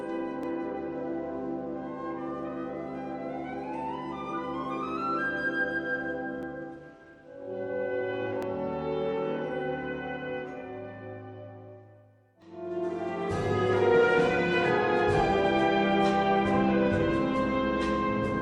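Brief skips at 0.43, 6.43, 8.43 and 12.42 s come from overlap between stream segments. Each falls on a 2-second segment boundary, where overlapping time stamps made the player discard about 15 ms of genuine audio, so the waveform jumps and the sound skips slightly.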